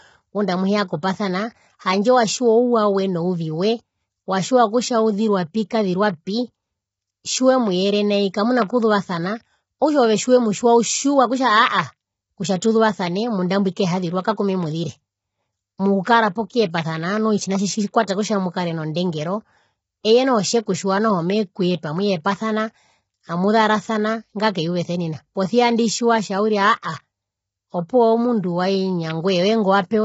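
From start to finish the speech sounds rough and grainy, with a hiss-like texture filling the gaps between the pitch harmonics and nothing at all above 7.8 kHz. The likely cause is heavy low-delay AAC compression (AAC-ELD). Too few bits are left to code the spectrum finely, and the damage fits a bitrate around 16 kbps. Unlike ordinary AAC smearing or swirling, the graininess sits on the voiced sounds themselves, and the top stops abruptly.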